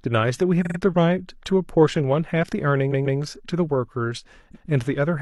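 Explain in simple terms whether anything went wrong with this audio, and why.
Repeated frames: a short chunk of the compressed audio was sent or stored more than once, so the player plays the same slice again. It sounds like a stutter, a brief catch where the speech seems to skip back. A 46 ms slice plays three extra times from 0.61 to 0.76 s. A 139 ms slice repeats twice from 2.88 to 3.16 s and once from 4.51 to 4.65 s.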